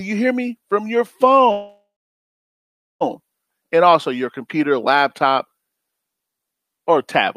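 At 1.51 s a call audio freeze sets in and lasts until 3.03 s. The last sound is stretched into a fading buzz, then about 1.15 s of silence, likely from packets stalling and draining the jitter buffer. Speech resumes where it stopped, nothing lost, now running about 1.49 s late.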